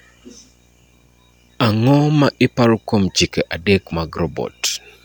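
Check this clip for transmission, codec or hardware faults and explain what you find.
One hardware fault is present: video or display buzz, running through the whole speech clip. A screen or video cable is coupling interference into the audio path, and it repeats at the picture's 60 Hz field rate. The result is a steady buzz at 60 Hz with a layer of hash sitting above it. It stays well below the speech, roughly 40 dB down.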